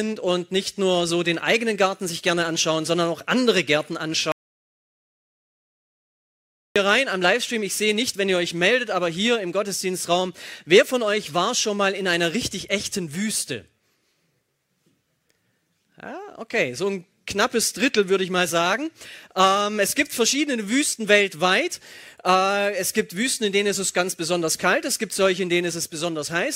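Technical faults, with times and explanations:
4.32 to 6.76 s, audio dropout to silence: the sound cuts off abruptly and comes back just as suddenly about 2.4 s later. The gap in between is dead silence, with no room tone or hiss at all, so the chain kept writing silence while nothing was reaching it. That most likely points to the input dropping out, through a loose connection, a failed link or an accidental mute. Whatever happened during those seconds is simply gone.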